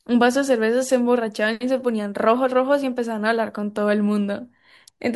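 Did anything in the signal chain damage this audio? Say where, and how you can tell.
No, nothing in this speech recording stood out on listening as damage from any stage of the signal chain.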